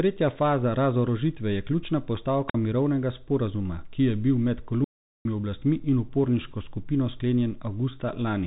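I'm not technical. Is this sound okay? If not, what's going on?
No, not really. Throughout the speech you can hear the Bluetooth CVSD headset codec, the basic phone-call mode of Bluetooth headsets. It cuts off everything above about 3.8 kHz, so the voice sounds muffled and boxy, with scratchy s sounds and a grainy hiss underneath.

At 2.48 to 2.55 s, right after "faza razorožitve je ključna" and before "mirovnega sporazuma ki je", there's a wireless microphone squelch dropout. The radio signal faded, the receiver muted itself for about 48 ms, and you hear a quick burst of hiss, a tiny hole, then the voice again.

The bigger problem is at 4.84 to 5.25 s, between "ki je bil med" and "oblastmi in uporniško skupino". That's an audio dropout to silence: about 0.41 s goes completely dead, with no background at all, most likely because the input briefly disconnected. Whatever was said there is lost.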